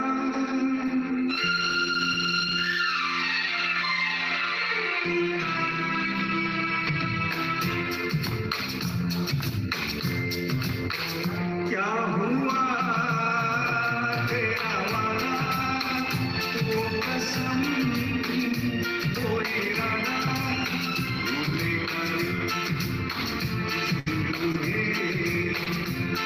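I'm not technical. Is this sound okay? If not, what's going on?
No, there are a few brief glitches near the end, all caused by bits of the sound arriving late or not at all over a network connection.

The biggest is a burst of packet loss from 23.99 to 24.09 s. For about 70 ms the player had nothing new to play, so it stretched out the last bit of sound and let it fade. Then the audio picks up again with roughly 60 ms skipped. Listen for a held buzz or fading hiss followed by a small jump forward. That jump is what sets it apart from the shorter glitches.

There are two short concealed packet losses, at 24.52 to 24.57 s and 25.64 to 25.69 s. Each time about 20 ms went missing and the player papered over it by continuing the sound it had just played, then blended back in. These are much quicker than the burst, and heard as a tiny smear or wobble rather than a noticeable fade-and-skip. A short sound can disappear in one.

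Three times the system recovered a lost packet rebuilt from error correction: at 24.06, 24.54 and 25.66 s, each about 20 ms. A rough backup copy, carried in the next piece of data, filled in the missing bit. So nothing drops out there, but those moments sound grainier and noisier rather than smeared or gapped.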